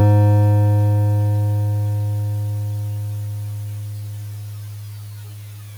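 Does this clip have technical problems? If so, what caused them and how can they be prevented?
No, this music clip has no technical problems.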